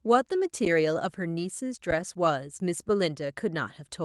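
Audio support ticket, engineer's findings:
Underrun with held sample at 0.65 s: waveform freezes flat for about 11 ms, then resumes where it stopped with no lost audio. Output buffer ran dry, gap of 256 samples.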